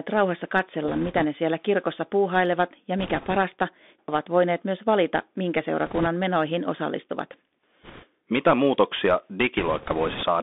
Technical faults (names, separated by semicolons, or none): Bluetooth CVSD headset codec; bit errors on a Bluetooth voice link